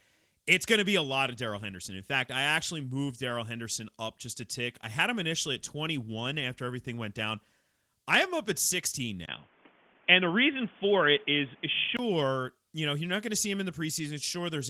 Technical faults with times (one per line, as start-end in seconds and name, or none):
9.26-11.99 input switched to a poorer device